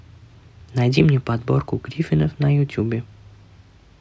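No technical faults are audible.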